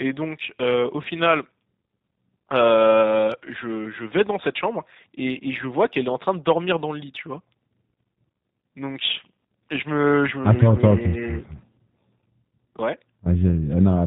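Plainly audible G.729 codec damage runs through the whole speech clip. Each 10 ms frame is rebuilt from a vocal tract filter, a pitch predictor and sparse pulses, so the speech sounds rough and synthetic with nothing above 4 kHz. A plain low-pass filter would leave it dull but smooth. This points to an 8 kbit/s coder.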